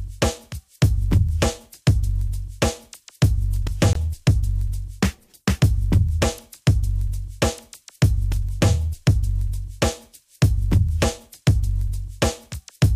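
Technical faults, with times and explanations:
3.93 to 3.96 s, Bluetooth dropout: a gap of about 23 ms of silence, likely one wireless packet missing, before the audio resumes further along.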